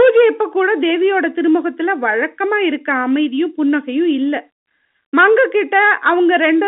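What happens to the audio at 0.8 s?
Nothing goes wrong at 0.8 s; the speech carries on intact through the narrow telephone band of the G.711 line, with no dropout, click or distortion at that point.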